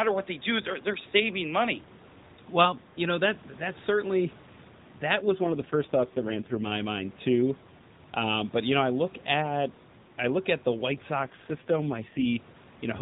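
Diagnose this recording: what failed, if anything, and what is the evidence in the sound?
An AMR rate drop, at the network and codec stage. From 5.20 to 6.73 s, ending just before "mind too", and again from 11.22 to 12.26 s, the speech turns buzzy and synthetic. There is no gap and no band change. This fits the link forcing AMR from 12.2 down to 4.75 kbps.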